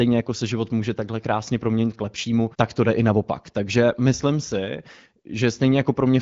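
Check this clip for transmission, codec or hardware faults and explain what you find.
No faults can be heard in this speech.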